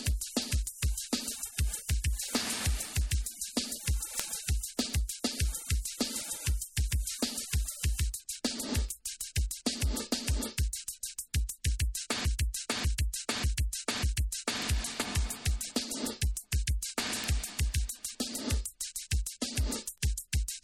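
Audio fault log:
4.20 s and 17.24 s, bit error spike: one sharp broadband tick each time, where a single flipped bit knocked one or two samples way off and straight back.
12.25–14.63 s, broken-record loop: a chunk of about 0.59 s plays four times back to back, likely a stalled player resending its last buffer, so the audio for that stretch is lost.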